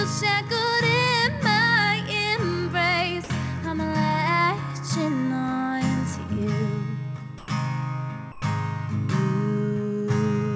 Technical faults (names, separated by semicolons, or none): sound dropped by the voice detector